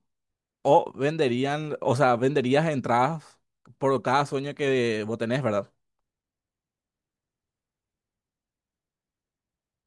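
Speech, with no technical faults to point to anywhere in the recording. Nothing in the signal path calls for comment at any moment.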